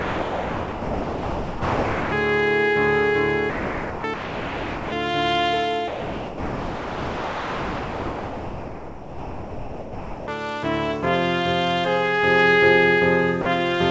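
The sound gives way to steady, featureless noise from 0 to 2.12 s, 3.50 to 4.04 s, 4.14 to 4.92 s, 5.88 to 10.28 s and 13.42 to 13.46 s, through a path with nothing above 8 kHz. This is sound dropped by the voice detector, which likely treated it as background and sent comfort noise.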